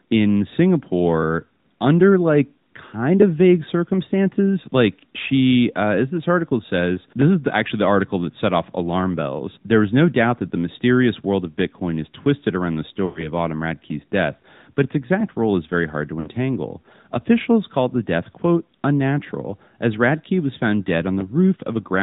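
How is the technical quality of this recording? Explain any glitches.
The technical quality is limited: the whole recording carries narrowband mobile-codec coloration, and two short dropouts interrupt the speech.

AMR narrowband mobile codec (throughout): The speech has passed through AMR-NB, which samples at 8 kHz and rebuilds the voice from a vocal-tract filter excited by a few coded pulses per subframe. Nothing above 4 kHz survives, so sibilants are dull and the voice sounds boxed-in. The audible buzzy, synthetic edge fits a mid-range mode of around 10.2 kbps.

Lost AMR speech frames (13.06 to 13.31 s and 16.20 to 16.30 s): At these points the decoder had no valid frames and filled the gap by repeating its last good pitch and filter settings at falling gain. The first gap fits about 100 ms of missing audio, roughly five 20 ms frames. The sound stretches, warbles and fades toward silence, then returns briefly rough. 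The second, about 60 ms, fits three frames and is heard as a shorter warbling dip.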